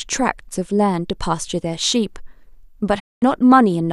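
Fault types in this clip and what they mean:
Digital broadcast dropout: the receiver mutes when frames arrive corrupted, so the speech fades out over 20 ms at 2.98 s and returns at 3.24 s. About 0.22 s is simply lost, not concealed; unlike analogue signal fading, clean silence, not hiss, fills the gap.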